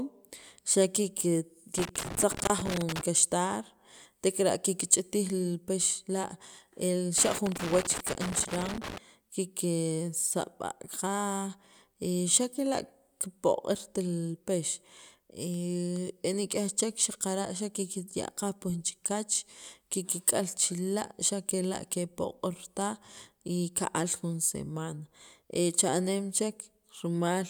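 Loose connector crackle runs from 1.78 to 3.01 s and again from 7.18 to 8.98 s: a worn or dirty contact keeps making and breaking, chopping the speech signal into irregular bursts of scratchy crackle.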